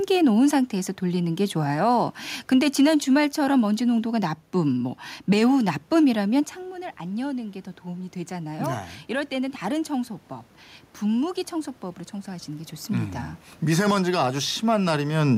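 Just after 6.5 s or so the talker seems to drift back from the mic, and the level drops by about 11 dB. From 6.69 s the automatic gain rising kicks in: the AGC hears the input go quiet and slowly pushes its gain up by about 11 dB, all the way to 15.26 s. You hear it as a long, gradual swell where the voice and the room noise come up together, so the background creeps forward along with the talker.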